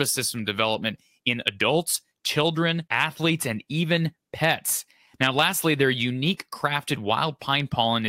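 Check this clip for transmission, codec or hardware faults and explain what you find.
Hard clipping occurs three times: 1.27 to 1.48 s, overdriven by about 3 dB; 2.94 to 3.04 s, by about 2 dB; and 5.23 to 5.47 s, by about 4 dB. In each burst the speech peaks exceed what a stage in the chain can pass, so the waveform tops are sheared flat, adding high harmonics that crackle harshly on the loudest moments. Unlike soft saturation, the onset is abrupt and gritty rather than a gradual warm thickening.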